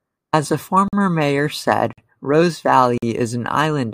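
The speech is delivered in one-second chunks with silence inserted at each join. This gap between chunks leaves hard-edged 48 ms holes at 0.88, 1.93 and 2.98 s, the first two on either side of "mayor said".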